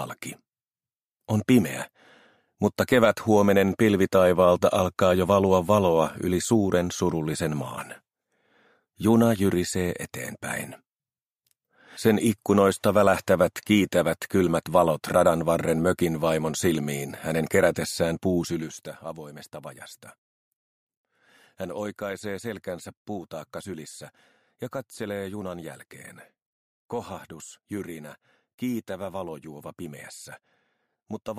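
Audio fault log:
18.44 to 18.86 s, zipper noise: the level drops by roughly 10 dB in coarse unsmoothed steps, around 200 per second, each leaving a tiny click, so a fine buzzy ticking rides the sound during the change, unlike a clean fader move.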